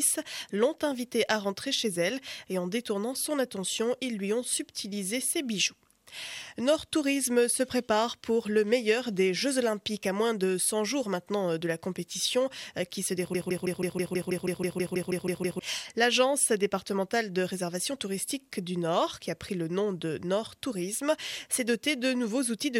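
At 13.35 s the player, encoder or stream most likely stalled and kept re-sending the last fragment still held in its buffer, producing a broken-record loop. A piece of about 0.16 s repeats exactly, back to back, 14 times, until 15.59 s. It sounds like a stuttering, mechanical chatter at roughly six repeats per second, and whatever audio should have filled those 2.2 seconds is missing when playback moves on.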